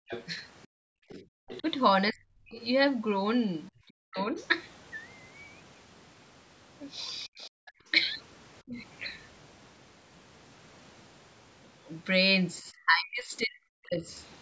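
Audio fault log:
0.00–0.94 s, background gated by the echo canceller: the canceller clamped the microphone while the loudspeaker played, so room sound drops by up to about 40 dB for under half a second in total.
0.08–1.63 s, 4.17–4.45 s, 7.44–7.71 s, other side's voice leaking through: likely incomplete echo cancellation lets the far-end voice into the microphone, heard roughly 15 to 30 dB below the talker.
1.22–2.59 s, 3.87–4.35 s, 7.26–8.78 s, 12.62–14.11 s, speech suppressed in double talk: with both sides talking, the canceller likely attenuated everything, so the talker dips by around 40 dB in pieces, longest near the end.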